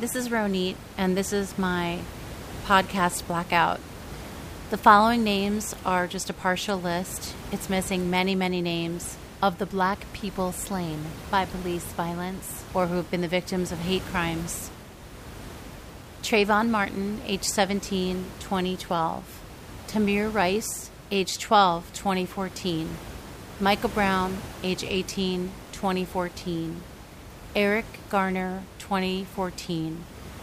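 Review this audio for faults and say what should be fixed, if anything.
Nothing in this speech recording needs fixing, since no faults can be heard. The room noise sits about 15 dB below the speech and belongs to the recording space rather than the system.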